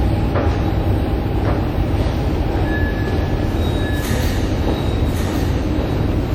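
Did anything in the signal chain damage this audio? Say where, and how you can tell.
Yes. At the mixing or capture stage, a full-band second copy trails by about one second, about 5 dB quieter, with no decay. This is likely a doubled audio track.

At the codec stage, the audio sounds ringing and washy throughout, with breathing hiss and nothing above 17.9 kHz. This likely comes from WMA compression near 48 kbps.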